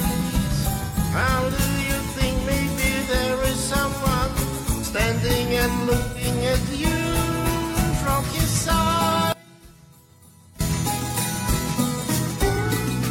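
From 0.86 to 0.98 s, and again from 5.98 to 6.26 s, the sound turns briefly smeared and noisy with a phasey edge. This is AAC frame loss with concealment. The decoder rebuilt the missing stretch from the last good spectrum. The gaps fit roughly two and four lost frames.

Between 9.32 and 10.61 s the audio collapses by about 26 dB, leaving only a faint residue. The likely cause is one channel inverted. With reversed polarity on one side, everything common to both channels cancels when the pair is heard summed to mono.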